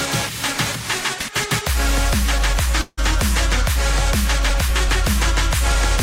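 Packets were likely held up in transit, so the jitter buffer ran dry at 2.81 s and a call audio freeze followed until 3.00 s. The last sound carries on as a fading buzz or hiss for about 160 ms, then about 20 ms of silence, before the sound resumes where it stopped, now 162 ms late and with nothing missing.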